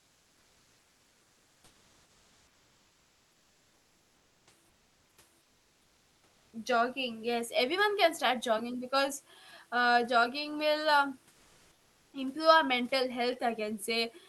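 A speech clip in which discontinuous transmission likely muted the sender during pauses, leaving the receiver to fill them with comfort noise in place of the background. From 0.0 to 4.47 s, 4.69 to 5.17 s, 5.41 to 6.53 s and 11.31 to 12.13 s, the room's real background turns into steady, featureless hiss about 1 to 5 dB quieter. A slow voice detector likely caused an onset clipped by the voice detector at 6.50 to 6.53 s: the first 30 ms of the returning sound are missing, so it starts abruptly.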